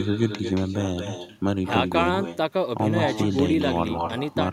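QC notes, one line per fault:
throughout, echo with no canceller: far-end loudspeaker leaks into its microphone uncancelled, so speech returns around 200 ms later, about 8 dB quieter and thinner.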